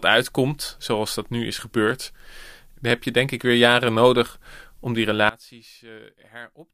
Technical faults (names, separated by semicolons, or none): sudden gain jump